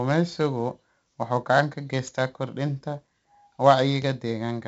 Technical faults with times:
0.00-4.68 4-bit ADPCM compression

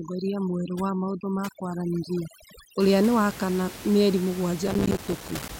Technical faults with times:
0.00-2.80 overdone noise removal
4.68-5.49 processor overload crackle

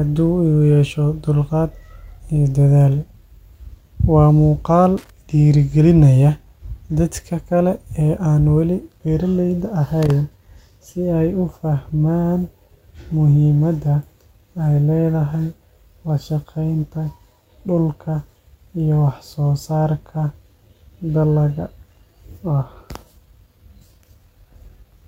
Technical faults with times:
4.98-5.10 loose connector crackle
10.03-10.11 loose connector crackle

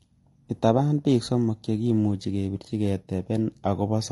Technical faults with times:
0.00-4.12 low-delay AAC compression

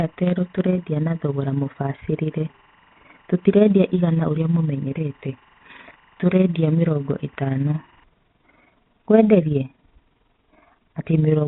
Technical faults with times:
0.00-11.47 overlap-add ripple
0.00-8.04 timecode bleed
0.73-0.75 packet loss with pitch repetition

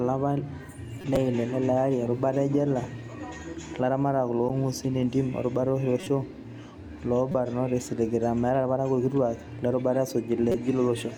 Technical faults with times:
1.01-1.17 corrupt frame decoded
4.48 corrupt frame decoded
6.00-6.07 corrupt frame decoded
7.31-7.35 corrupt frame decoded
10.50-10.55 corrupt frame decoded

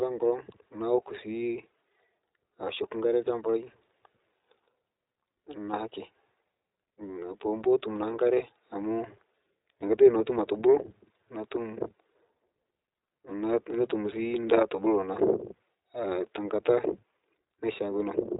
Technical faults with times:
0.00-18.40 iLBC codec

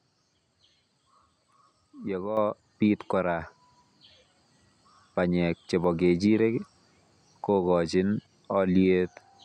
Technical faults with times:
2.37 microphone volume stepped up

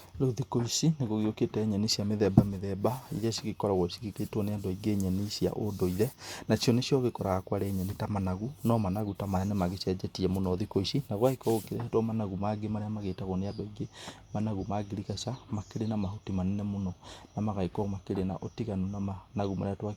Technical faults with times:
none

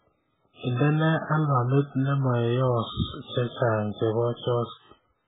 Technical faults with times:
0.00-5.28 MP3 compression

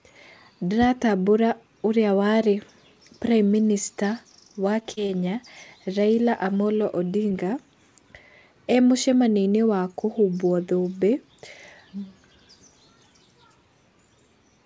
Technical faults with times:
4.80-5.11 repeated packet loss (robotic sound)
7.30-7.45 short concealed packet loss

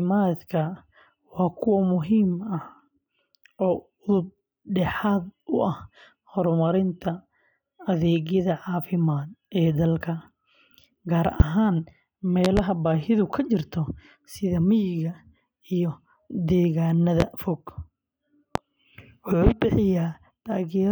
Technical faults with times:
11.40-11.44 loud pop
12.45-12.61 loud pop
17.20-17.24 loud pop
18.55-18.59 loud pop
19.47-19.50 loud pop

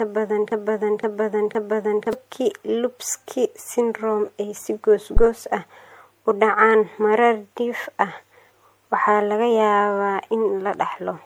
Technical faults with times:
0.00-11.26 generation loss
0.00-2.13 broken-record loop
5.17-5.26 phantom power thump

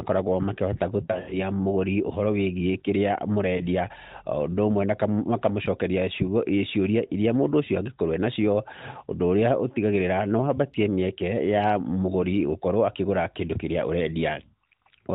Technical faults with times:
1.04-1.37 lost AMR speech frames
3.58-3.67 lost AMR speech frames

